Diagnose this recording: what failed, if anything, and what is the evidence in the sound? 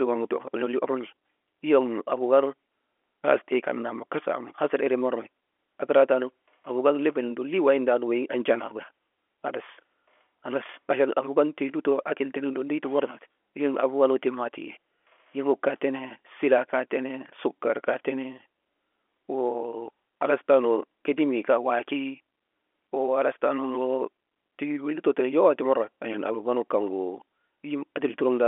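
Nothing failed: the speech comes over a G.711 telephone coding path, band-limited to the 300 Hz to 3.4 kHz line band with nothing above 3.8 kHz, which is simply how a 64 kbps mu-law telephone channel sounds.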